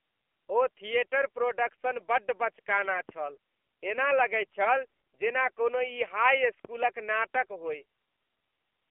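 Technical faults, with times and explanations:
Throughout: AMR narrowband mobile codec. The speech has been squeezed through a mobile-phone speech coder that samples at 8 kHz and rebuilds the voice from a vocal-tract model fed by a pitch predictor and a handful of pulses per 5 ms frame. Nothing above 3.4 kHz survives, and little below 300 Hz. The coding damage is plainly audible as a synthetic, modelled quality, which fits a low rate of about 7.4 kbps.
3.09 to 3.14 s and 6.65 to 7.12 s: phantom power thump. A supply was switched on a live input, and the sudden voltage step passed through the coupling capacitors into the signal. Each event is heard as a deep low-frequency thump. The first is short, 50 ms long with a decay of about 11 ms. The second lasts nearly half a second and dies away over about 106 ms.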